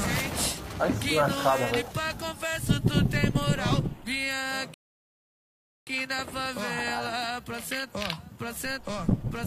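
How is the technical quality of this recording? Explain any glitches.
There is one clear glitch: a rebuffering stall from 4.74 to 5.87 s. Playback ran out of buffered audio and halted, leaving about 1.13 s of silence before the sound picks up exactly where it stopped. Nothing is skipped; the gap only adds time.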